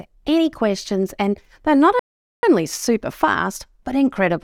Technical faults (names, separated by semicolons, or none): rebuffering stall